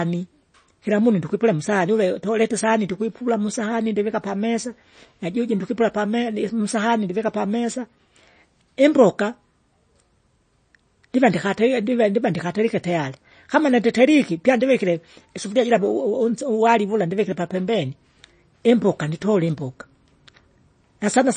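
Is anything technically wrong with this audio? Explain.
Yes, there's one problem. Throughout, the speech has that watery, swirly quality with nothing above 9.1 kHz, likely MP3 compression starved of bits, which fits something around 32 kbps.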